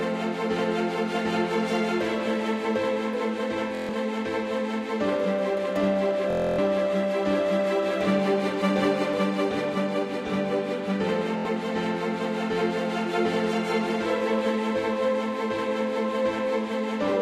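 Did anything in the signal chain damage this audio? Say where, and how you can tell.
Yes. The Bluetooth link lost or delayed audio packets, and the receiving end filled each gap by replaying its last buffer. You can hear this Bluetooth stutter at 3.75 to 3.94 s, 6.30 to 6.58 s and 11.38 to 11.45 s. A tiny slice of sound repeats as a rapid buzz, then the audio jumps ahead as if it had kept playing. The longest dropout, about 280 ms at 6.3 s, fits a run of roughly a dozen lost packets of about 23 ms each.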